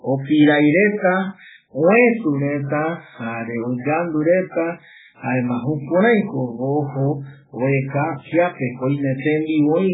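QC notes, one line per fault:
Throughout, MP3 compression: the speech has nothing above 3.8 kHz and sounds heavily watery and swirly, with smeared attacks. This is likely a bit-starved MP3 encoder cutting the treble and switching weak frequency lines on and off between frames, which fits a bitrate near 8 kbps.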